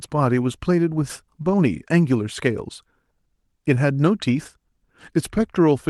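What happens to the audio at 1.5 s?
Nothing goes wrong at 1.5 s: the speech carries on intact through the call path, with no dropout, glitch or other fault at that point.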